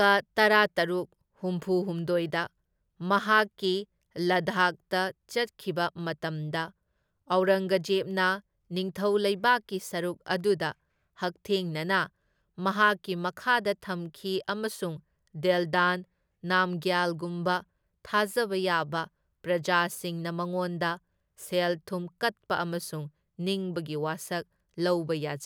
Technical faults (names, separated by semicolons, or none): none